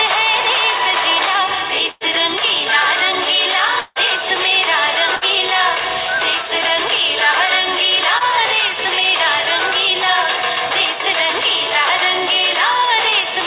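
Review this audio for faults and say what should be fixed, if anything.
Burst of packet loss at 1.91 to 2.04 s and 5.16 to 5.24 s: a run of consecutive packets failed to arrive in time. The receiver stretched the preceding sound for about 95 ms and 57 ms, fading it, then jumped ahead, losing roughly 90 ms and 60 ms of audio. A deeper jitter buffer or forward error correction on the sending side would prevent this.

At 3.81 to 3.99 s the last sound is held and faded for about 150 ms, a brief silence of about 10 ms follows, and the audio returns with roughly 150 ms missing. This is likely a long network dropout, where nothing reached the receiver for that stretch. A more stable network link, or redundancy that survives longer outages, would prevent it.

Short concealed packet loss at 8.18 to 8.23 s: about 30 ms never reached the decoder, which patched the hole with roughly 20 ms of extrapolated sound before blending back. 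The result is a quick smear or wobble in the audio, band-limited below 4 kHz like the rest of this narrowband call. Reducing jitter, or adding packet redundancy, would prevent this.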